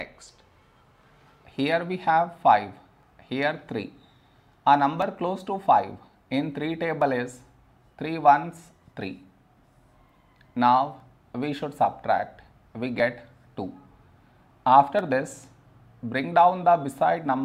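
Overlap between stream segments at 1.03, 3.03, 5.02, 7.02, 11.00, 13.00 and 14.99 s: overlapping segment boundaries get trimmed, cutting a few milliseconds of real sound, so the waveform jumps. Each is a tiny skip with no silent gap, following the 2 s segment rhythm.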